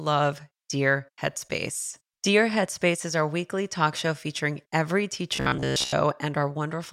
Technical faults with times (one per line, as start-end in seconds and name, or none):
5.36-5.93 robotic sound from repeated short buffers